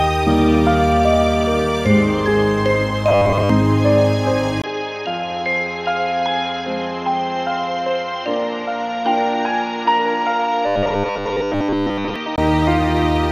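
From 3.09 to 3.50 s the sound takes on a rigid, metallic buzz at a fixed 100 Hz. This is robotic sound from repeated short buffers, likely caused by new audio arriving too seldom so that the last 10 ms of audio is replayed while fresh material is dropped. That 100 Hz pitch matches one over a 10 ms repeat. Most of the original audio in the span is lost, and what remains only loosely follows the underlying contour.

At 4.62 s there is a 20 ms gap, and from there to 12.38 s the input is switched to a poorer device, likely a different microphone or a headset call profile. The band is narrower, so the sound turns dull and boxy. The level is roughly 5 dB lower, and a new noise floor sits about 45 dB below the signal.

From 10.67 to 12.16 s, inside that degraded stretch, the same 100 Hz robotic buzz returns. The pattern again fits a repeated 10 ms buffer replacing most of the incoming audio.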